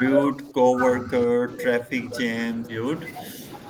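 Speech that repeatedly sinks in level. It dips from 0.22 to 0.78 s, by around 20 dB at worst. It dips again from 1.02 to 1.57 s and briefly at 1.82 to 1.92 s. This is likely speech suppressed in double talk, where the echo canceller attenuated the talker along with the far-end echo.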